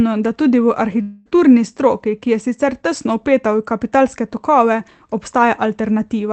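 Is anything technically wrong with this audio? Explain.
Yes. From 1.01 to 1.28 s, just after "da tudi v", there is a long network dropout. Audio packets likely stopped arriving, so the receiver invented about 240 ms of sound by stretching the last sound into a fading buzz or hiss. The speech resumes at "stroki ki je sicer" with that stretch missing. The Opus call path's 8 kHz band limit also dulls the top end throughout.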